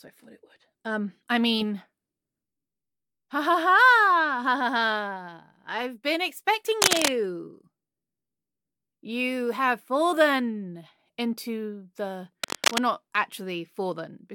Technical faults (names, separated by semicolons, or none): cable scratch noise